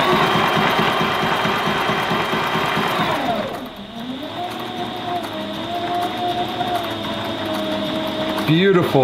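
No technical fault can be heard anywhere in this audio. Nothing in it calls for comment from an engineering standpoint.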